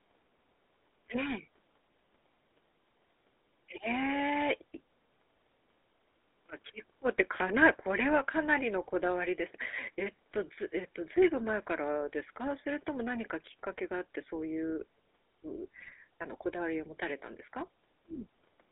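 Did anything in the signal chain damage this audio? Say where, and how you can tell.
Yes, and it's the codec stage across the whole clip. The speech has the buzzy, gravelly grit of the GSM full-rate codec, and it's plainly audible throughout. The band runs from about 250 Hz to 3.6 kHz, so the low end and everything above that are gone. That roughness comes from modelling the vocal tract and exciting it with a sparse, regularly spaced pulse train, which is what you'd expect from a 13 kbps full-rate coder.

Then there's a short burst of GSM bit errors from 15.80 to 15.93 s, where the speech breaks into squawks and gargling pops. That points to corrupted bits getting through the radio link into the decoder. When the filter, pitch or gain parameters get scrambled, the spectrum warps or the level jumps for that frame. The length of the burst fits about half a dozen damaged 20 ms frames on a fairly poor link.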